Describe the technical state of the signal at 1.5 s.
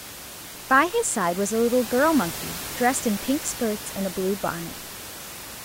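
At 1.5 s the signal is intact, with only the room's background noise sitting about 12 dB below the speech.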